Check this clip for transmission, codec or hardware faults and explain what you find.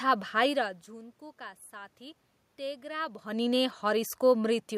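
No transmission, codec or hardware fault turns up anywhere in this speech recording. Background noise from the room sits under the voice, and the level shifts near half a second and again around 3 s as the talker moves relative to the microphone.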